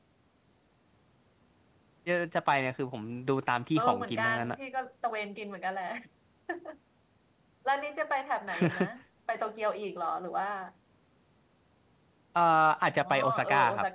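No technical faults can be heard in this speech clip. It carries the narrow sound of a telephone-style call path, with nothing above about 4 kHz, which fits G.711 mu-law coding at 64 kbps.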